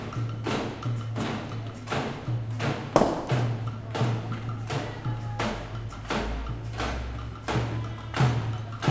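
No technical faults can be heard anywhere in this recording of sounds. There is nothing here that needs a timestamp or further comment.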